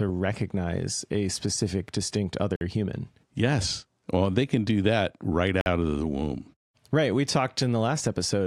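A gap between chunks occurs at 2.56 to 2.61 s and again at 5.61 to 5.66 s: the speech arrives in 3-second pieces with 50 ms of silence inserted at each join, so nothing is lost but the flow breaks into short holes.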